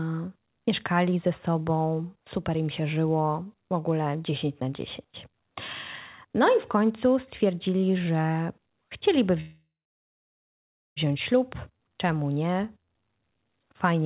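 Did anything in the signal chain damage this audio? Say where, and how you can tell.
Yes, at the network and jitter-buffer stage. Right after "końcu stwierdzili że chcieliby", from 9.4 to 10.98 s, the speech stalls: the last sound is held briefly as a fading buzz or hiss, then about 1.27 s of silence follows before the talker resumes exactly where they left off. Nothing is lost, but about 1.56 s of delay is inserted. This is a call audio freeze, likely caused by packets held up in transit so the jitter buffer ran dry. The G.711 call path leaves nothing above 4 kHz throughout.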